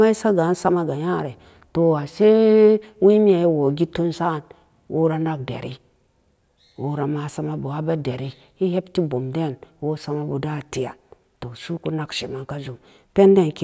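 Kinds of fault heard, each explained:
No technical faults can be heard in the signal at any point in the recording.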